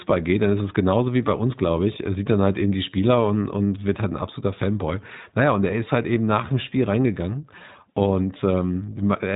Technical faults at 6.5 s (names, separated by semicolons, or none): iLBC codec